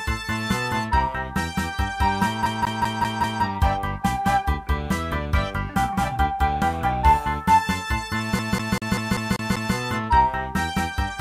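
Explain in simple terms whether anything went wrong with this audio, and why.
The disc player got stuck on one turn of the CD: a scratch kept knocking the laser back to the same track, so the same short stretch of about 0.19 s played over and over. From 2.46 to 3.43 s it repeats five times, and from 8.39 to 9.75 s seven times, each repeat cut off by a tiny gap where the laser jumps. You hear this as a quick, even, machine-like stutter.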